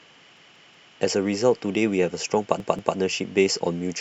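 Repeated buffer at 0.37 to 0.93 s and 2.60 to 2.97 s: a 186 ms chunk, consistent with an 8192-sample buffer, replays three, then two extra times with hard joins.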